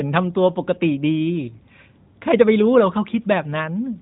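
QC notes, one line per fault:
No faults heard in this speech clip.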